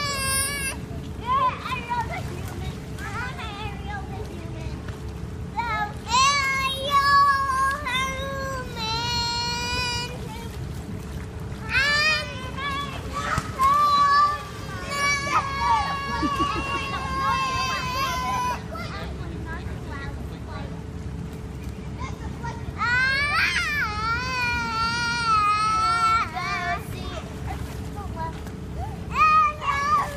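A faint, steady whine at a fixed pitch sits under the sound from 26.13 to 29.35 s, built on 1 kHz with its strongest part at 2 kHz, roughly 40 dB below the signal. This is USB whine: current drawn in the bus's 1 ms frames leaking into the audio through power or ground.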